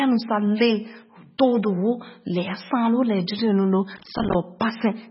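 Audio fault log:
Throughout: MP3 compression, likely at a very low bitrate near 16 kbps, cuts everything above 5.6 kHz and zeroes weak lines, leaving speech dull, watery and swirly with smeared attacks.
3.97–4.35 s: processor overload crackle, the processor missing about thirty short buffer deadlines in a row, each gap falling silent, heard as a burst of gritty tearing.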